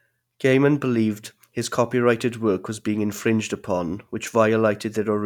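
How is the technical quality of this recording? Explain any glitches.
No glitches or faults detected.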